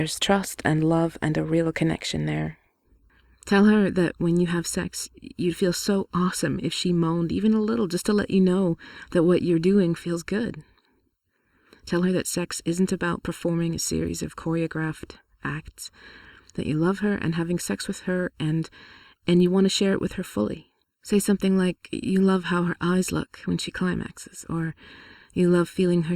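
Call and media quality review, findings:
Channel delay (comb filtering), 2.84 s to end. Speech turns hollow and phasey, fixed notches from around 700 Hz up. Probable component: stereo-to-mono downmix, one channel late by under a millisecond. Summing cancels shared content at evenly spaced frequencies, roughly every 1.4 kHz above that first notch. Worth checking channel alignment upstream of the mix.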